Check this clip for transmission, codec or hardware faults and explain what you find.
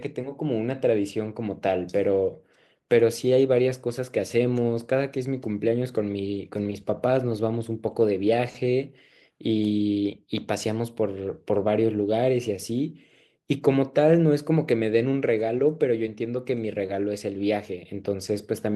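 One transmission fault is audible, a single lost packet rebuilt from error correction, at 3.67 s in this speech. The frame that should have arrived there went missing. The decoder filled about 20 ms from the lower-bitrate copy carried in the following packet, which fits a single lost packet. There is no gap or click, just a brief rougher, noisier patch. On a spectrogram it appears as a thin, slightly smeared, grainier vertical strip. The waveform stays continuous.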